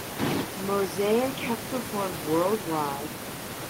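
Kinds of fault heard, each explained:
No technical fault is present in the signal, with the background noise of the room sitting about 9 dB below the speech as part of the recording itself.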